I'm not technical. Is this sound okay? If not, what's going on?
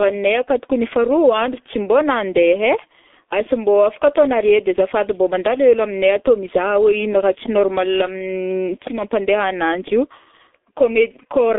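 No. The whole recording has passed through the G.723.1 codec, an early internet-phone format that squeezes speech very hard. Nothing above about 3.7 kHz survives, so the speech sounds muffled and hoarse throughout, and consonants blur.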